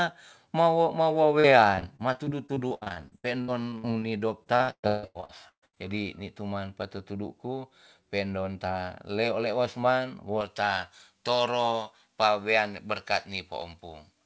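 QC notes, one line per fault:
1.40–4.03 s and 4.43–5.78 s, repeated packet loss (robotic sound): choppy sound with pieces missing begins after "ma wo mawo" and ends just before "ni tu man pa". Packets repeatedly went missing, and each hole was patched by extending the preceding sound. About a fifth of the first stretch is patched, with gaps up to 70 ms. About half of the second is patched, with gaps up to 158 ms, so it sounds rougher.
10.41–14.25 s, pre-emphasis left on: from just after "ta leo leos man" the sound turns thin, bright and hissy on sibilants. The treble was boosted for recording or transmission and the matching cut was never applied, leaving a boost of about 11 dB at 10 kHz relative to 1 kHz. This fits a J.17 curve. The call codec's top end stops at 8 kHz.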